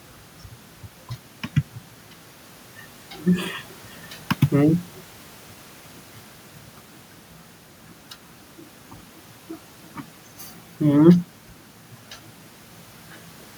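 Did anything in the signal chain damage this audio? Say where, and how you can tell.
No, there's no sign that any stage of the chain, from capture through to playback, has damaged this speech recording.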